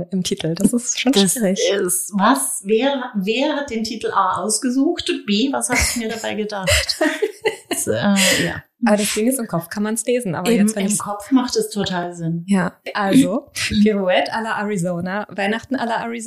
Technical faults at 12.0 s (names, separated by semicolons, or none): block of digital silence